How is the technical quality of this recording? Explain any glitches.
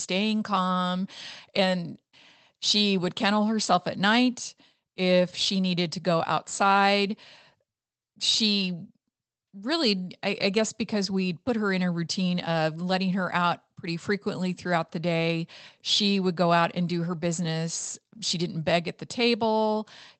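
No glitches or faults are audible anywhere here.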